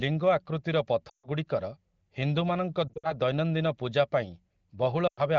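Speech coded with AMR-WB, with lost AMR speech frames at 1.09–1.28 s, 2.88–3.14 s and 5.08–5.21 s. The decoder repeats the last good spectrum with falling gain, so a spectrogram shows smeared, fading harmonic bands and a waveform shows a sagging envelope.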